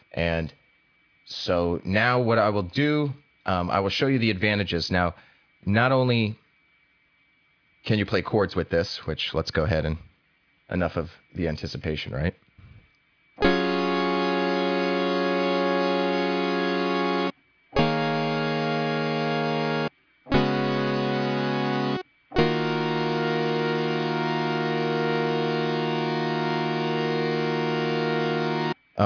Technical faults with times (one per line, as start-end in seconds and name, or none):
none